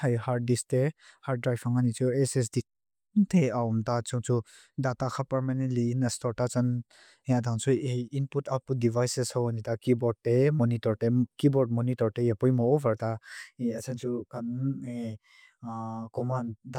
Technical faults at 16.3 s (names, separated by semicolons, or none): channel delay (comb filtering)